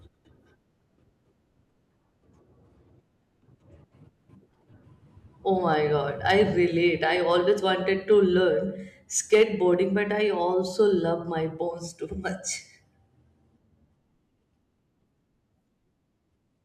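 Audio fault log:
6.26–6.42 s, 8.12 s, 9.33–9.74 s: hard clipping. Speech peaks overdrive about 4 dB, then about 1 dB, then about 4 dB, so the tops get sliced flat and you hear crackle on the peaks.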